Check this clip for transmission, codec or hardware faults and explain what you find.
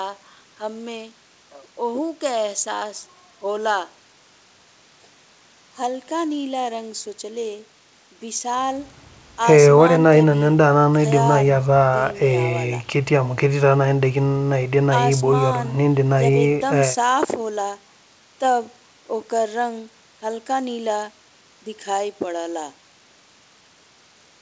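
Nothing stood out on listening to this speech, which arrives over a call path whose band stops at 8 kHz, as expected of a wideband call codec.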